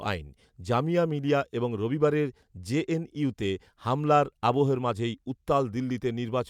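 Listening to the speech recording, nothing stood out as a technical problem.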